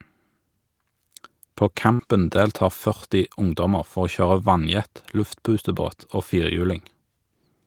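At 1.93 s the speech briefly smears into a held, fading tail for about 57 ms, then picks up again at 2.02 s with a small jump, as though a fragment had been snipped out. It is a burst of packet loss. Several consecutive packets never arrived in time, so the receiver stretched the last sound it had and faded it down. When audio resumed, about 60 ms of the original speech was simply gone.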